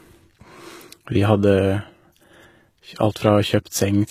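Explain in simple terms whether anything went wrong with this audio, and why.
Something went wrong, and it lasts through the whole clip. The s sounds in the speech come out gritty and metallic. The likely cause is HE-AAC compression. It keeps the lower sounds but rebuilds the treble from copies of them, so the top doesn't quite match.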